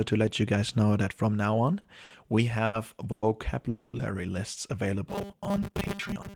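Short stalls from a late packet occur at 1.81 to 1.86 s and 2.04 to 2.12 s, both just after "that from now on", and again at 2.66 to 2.76 s. Each time a packet missed its slot, the jitter buffer emptied, and the receiver held the last sound for 30, 60 and 80 ms respectively before resuming at the same point. Nothing is lost, but the speech briefly drags with a faint buzz or dip, and the delay grows with each stall.

A call audio freeze follows at 3.12 to 3.30 s, with a longer one at 3.69 to 3.95 s. The likely cause is packets delayed in transit, draining the buffer so that the receiver had to invent sound to fill the wait, 110 ms the first time and 240 ms the second. It never drops to silence: the last sound carries on as a fading buzzy hiss, then the speech picks up where it stopped, now later.

Robotic sound from repeated short buffers runs from 5.09 s to the end of the clip. Audio is likely arriving too rarely, so the software loops the final 5 ms of each buffer while most of the real signal is skipped. 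That fixed repeat imposes a 200 Hz pitch, turning the speech into a rigid, metallic drone that only loosely tracks the original syllables.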